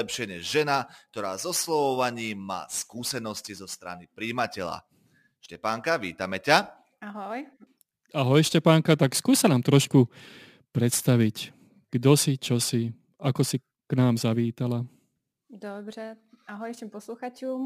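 From start to finish the speech carries crude rate conversion. The sound points to a change from 48 kHz to 44.1 kHz done by picking the nearest sample, so samples are dropped in a fixed repeating pattern with no anti-aliasing filter. The timing error sits roughly 25 dB below the speech and produces tones unrelated to it, heard as a gritty, inharmonic fizz that rides on louder and brighter sounds such as sibilants.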